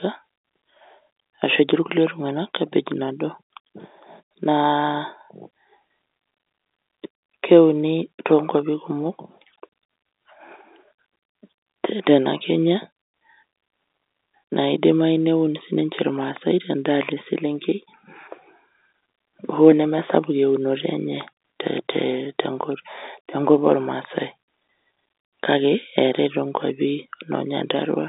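No technical faults occur at any point in this speech clip, which comes over a G.711 telephone line.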